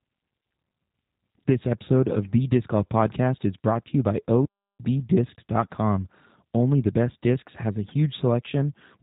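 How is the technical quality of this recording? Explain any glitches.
The technical quality is limited, with two clear problems. Throughout, the speech sounds rough and synthetic. The audio goes silent once mid-sentence.

The G.729 codec damage runs the whole length. Speech is rebuilt from a vocal tract model and a few pulses per frame, giving a buzzy, artificial texture. The sound fits an 8 kbit/s G.729 stream. Nothing passes above 3.8 kHz, so it sounds narrow and muffled.

A playback stall occurs from 4.45 to 4.80 s, right after "brought to you by". The sound cuts out for about 0.34 s, then resumes. The player likely ran out of data or was briefly blocked.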